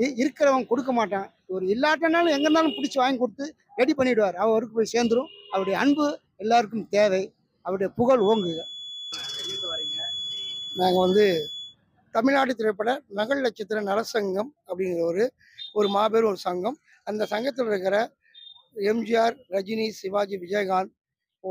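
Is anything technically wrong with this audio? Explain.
Yes. From 8.15 to 11.76 s there is a feedback whistle: a thin, steady 3.4 kHz tone sitting roughly 10 dB below the main signal and swelling and fading slowly in level. This is likely a loudspeaker-to-microphone loop held just at the edge of oscillation, sustaining that single frequency without building up further.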